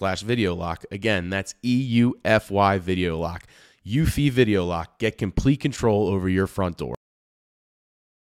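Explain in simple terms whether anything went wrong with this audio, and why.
The speech has a cut-off end: at 6.95 s, right after "control over your front", the audio stops mid-sound and drops straight into digital silence with no natural fade. The final stretch of audio was never written to the file, so the recording ends abruptly.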